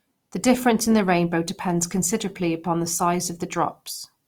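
A speech clip carrying Opus compression damage from start to finish, plainly audible throughout. The speech sounds rough and grainy instead of hollow or swirly: it turns noisy while the full bandwidth stays present. That texture likely comes from Opus running in its CELT music mode at a low rate, which fits around 24 kbps, where band energies are preserved but bands short of bits are filled by folding or noise.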